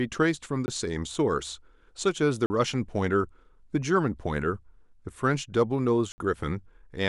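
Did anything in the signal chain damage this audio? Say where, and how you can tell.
Yes. Blocks of digital silence occur at 0.66 s (20 ms), 2.46 s (40 ms) and 6.12 s (60 ms). The speech cuts out and back with no fade. This points to a driver or buffer stage that missed its deadline.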